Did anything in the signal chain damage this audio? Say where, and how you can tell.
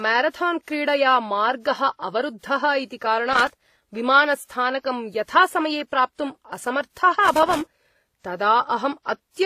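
Yes. Throughout the speech there is a layered quality of mixed artefacts with nothing above 14.9 kHz, likely transcoding between lossy codecs at the codec stage. It sounds like a low-rate HE-AAC pass later re-encoded to WMA, with both sets of artefacts stacking.

Irregular scratchy bursts from 3.33 to 3.66 s and 7.25 to 7.83 s are loose connector crackle in the analogue wiring: a worn contact intermittently breaking the signal.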